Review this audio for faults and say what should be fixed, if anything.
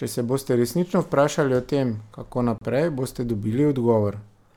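Right after "vprašali o tem kako", the speech cuts to dead silence for 30 ms, from 2.58 to 2.61 s, then resumes. This is likely a Bluetooth stall: radio interference held back packets, the headphones' buffer ran empty, and playback paused until the resent packets arrived. Keeping the phone close to the headphones and away from busy 2.4 GHz traffic, or using a larger playback buffer, would prevent it.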